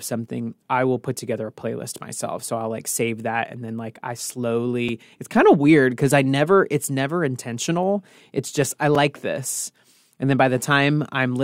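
At 4.89 s, just before "it's kind of weird", and again at 8.95 s, right after "just I", the speech drops into a block of digital silence lasting about 5 ms and 4 ms. Samples are zeroed with hard edges, so each registers as a tick: a flat-line notch in the waveform and a thin vertical broadband stripe on a spectrogram.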